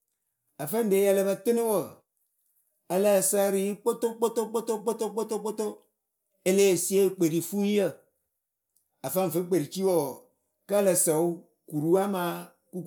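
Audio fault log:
No audible faults detected.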